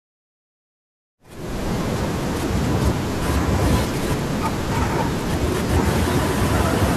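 Nothing stood out on listening to this speech, which opens with a smooth fade-in from roughly 1 s that reaches full level at 1.81 s.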